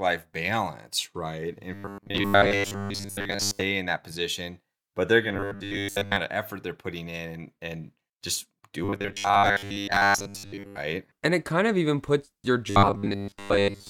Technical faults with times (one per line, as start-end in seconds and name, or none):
1.74-3.61 robotic sound from repeated short buffers
5.29-6.16 robotic sound from repeated short buffers
8.84-10.77 robotic sound from repeated short buffers
12.70-13.89 robotic sound from repeated short buffers